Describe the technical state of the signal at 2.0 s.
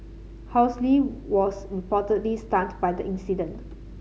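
At 2.0 s the speech signal is intact, with no audible fault at that point.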